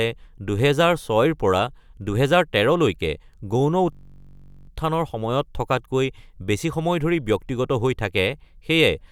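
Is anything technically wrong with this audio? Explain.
Yes. From 3.93 to 4.69 s there is a system hang loop: playback stalled while the hardware kept replaying one 21.33 ms block, which fits a 1024-sample buffer. That chunk repeats exactly at 46.9 Hz, so the speech turns into a steady, hard buzz.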